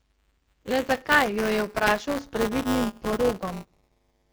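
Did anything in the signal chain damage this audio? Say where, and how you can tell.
Yes, two stages left their mark, both running throughout the clip.

The codec stage shows AMR wideband (HD Voice) damage. The speech has a harsh, raspy texture, and nothing is present above about 7 kHz, with the top band sounding like hiss rather than speech detail. That roughness fits the lowest AMR-WB rate, 6.6 kbit/s, where the pulse-excited vocal tract model runs short of bits. A narrowband codec would be cut off near 3.4 kHz instead, so the reach up toward 7 kHz marks this as the wideband codec.

The driver or buffer stage shows buffer tearing. A steady robotic buzz at 200 Hz sits under the speech and drops away in pauses. A 200 Hz repetition points to a buffer period of about 5 ms. In each period, a small slice of roughly 7 percent holds audio about 10 ms old, and it is spliced in with hard edges on both sides. 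Codec rasp follows the voice, but this buzz keeps a fixed pitch regardless of the voice, which separates the two.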